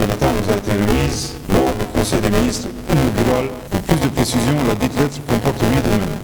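Buffer tearing runs through the whole clip. The write and read positions in the ring buffer have slipped and cross every period. Most of each buffer repeats audio about 20 ms old. Hard joins produce a rattling 200 Hz buzz, fitting a 5 ms buffer, whenever sound plays.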